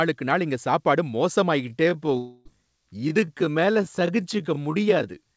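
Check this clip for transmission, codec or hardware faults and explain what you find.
Two faults are audible in this speech clip.

From 1.59 s to the end, the pace suddenly drops to about 0.63 times normal speed while the pitch stays put. This is a time-stretched section. The likely cause is software lengthening the audio to fill a duration, holding pitch by repeating short fragments rather than resampling. Those repeated fragments make the slowed speech drag.

Between 2.18 s and 2.47 s, inside the stretched region, there is a long network dropout in which about 280 ms of audio never arrived. The receiver likely covered the gap by extending the last received sound for about 273 ms, which comes across as a fading buzzy or hissy tail rather than silence. The speech then resumes further along, with the lost portion simply absent. The band limit at 8 kHz fits the G.722 call codec in use.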